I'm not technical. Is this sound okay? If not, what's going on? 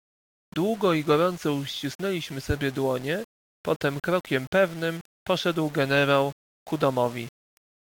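No. The speech sounds grainy from start to finish, with a rough fizz that follows the voice and is most noticeable in quieter moments. This is likely low bit depth without dither: the audio was rounded to very few levels, roughly six bits' worth.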